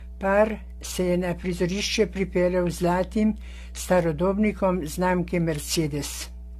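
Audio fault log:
throughout mains hum: a steady low tone at 60 Hz sits under the speech at about 15 dB below it, with some low harmonics above it, as the power line couples into the signal through a ground loop or a nearby transformer.
throughout generation loss: the speech sounds swirly, smeared and hollow, with blurred consonant attacks and nothing above 14 kHz, likely from repeated AAC-LC encoding at 64 kbit/s, around five passes, each requantising on a shifted frame grid so noise and spectral holes accumulate.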